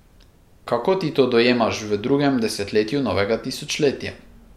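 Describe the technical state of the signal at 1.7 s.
At 1.7 s the signal is intact, with no dropout, distortion or other fault audible at that point.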